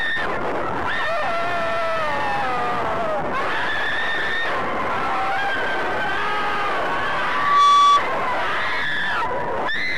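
The audio has a loudspeaker feedback squeal from 7.22 to 8.03 s. A 1.2 kHz tone swells over a few tenths of a second to about 10 dB above the programme level. A microphone is picking up its own loudspeaker, and loop gain exceeds unity at that frequency.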